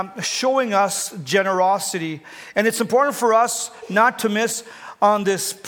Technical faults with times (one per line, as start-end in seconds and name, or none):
none